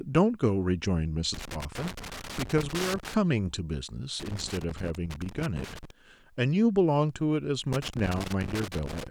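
Loose connector crackle hits the speech from 1.34 to 3.14 s, 4.20 to 5.91 s, and 7.73 s to the end. A worn contact rapidly makes and breaks, chopping the signal into irregular scratchy bursts: ragged gaps and spikes in the waveform, scattered broadband vertical streaks on a spectrogram.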